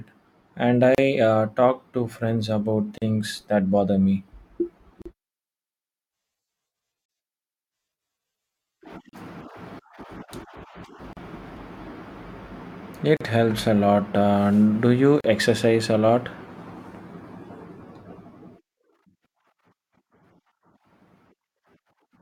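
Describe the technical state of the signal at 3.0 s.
At 3.0 s there is a gap at a join of encoded pieces, running from 2.98 to 3.02 s, a silence of about 38 ms. The speech was encoded in separate pieces, with joins every 2 s, and stitched together untrimmed, so the encoder's start-up delay and last-frame padding sit between them. On the waveform the signal drops to a flat line with softened edges. On the spectrogram it appears as a thin vertical blank band before the speech resumes where it stopped.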